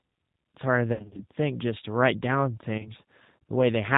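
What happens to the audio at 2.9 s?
Around there you're hearing VoIP packet loss concealed by the speech codec, running from about 2.78 to 2.91 s. Roughly 50 ms of audio goes missing, scattered over about 80 ms with no single gap longer than 20 ms, which fits several lost 10 ms frames. The decoder fills each hole by carrying its last pitch and vocal-tract filter forward at falling gain, so the sound smears into a short, fading buzzy tone or coloured noise. Because each frame builds on the previous one, it stays thin and a bit distorted briefly after the packets return.

All of this sits on top of the G.729 codec, the G.729A variant, which runs through the whole clip and is plainly audible. The bandwidth stops at 4 kHz, and the speech is rebuilt from a filter, a pitch predictor and a handful of pulses per frame. That gives it a slightly rough, synthetic edge consistent with an 8 kbit/s stream.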